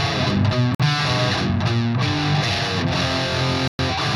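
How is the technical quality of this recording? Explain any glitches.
The recording has two brief dropouts. At 0.75 s the sound cuts to silence for about 51 ms, and at 3.68 s for about 114 ms, each time resuming afterward. These are likely Bluetooth stalls, where interference delayed packets until the headphones' buffer emptied.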